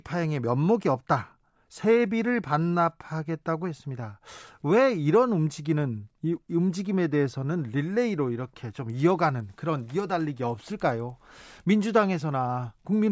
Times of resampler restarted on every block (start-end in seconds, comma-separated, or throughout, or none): 8.90-11.70